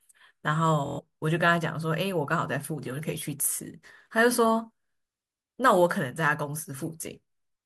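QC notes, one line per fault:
0.86–1.00 s, Bluetooth stutter: the receiver replays one short slice while packets go missing, so the speech buzzes. Unlike a dropout there is no silence, and speech resumes later, skipping about 116 ms, which fits roughly five lost packets.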